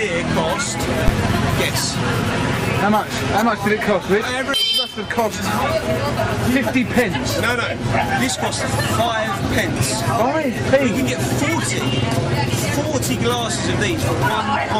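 A calculation in the processing chain produced invalid numbers at full scale at 1.08 s, pinning the output to one extreme value for one short block of about 12 ms, which fits a 512-sample buffer. Because the block is so brief, it is heard as a single loud bang in the audio.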